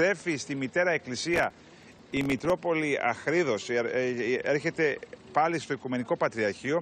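From 1.34 to 2.50 s a burst of processor overload crackle tears through the sound. Deadlines are missed in a row, and stale audio is replayed with hard edges. That suggests around thirty short buffers of roughly 1.5 ms. A spectrogram shows dense vertical broadband streaks, and the waveform shows jagged discontinuities.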